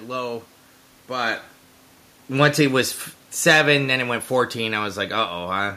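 From 3.33 s to 5.72 s the speech sinks steadily, about 4 dB quieter by the end, and the room noise beneath it drops by the same amount, so the whole sound recedes together. That shared fall is the sign of automatic gain falling: the gain control judged the input too loud or its background noise too strong and eased its gain down gradually. The level change around 1.0 s is different, since only the talker shifts relative to the microphone there.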